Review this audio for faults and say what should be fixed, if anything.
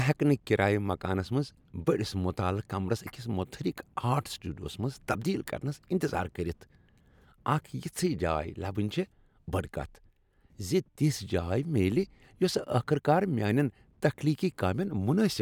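Nothing here needs fixing, since no technical faults come through anywhere in the recording.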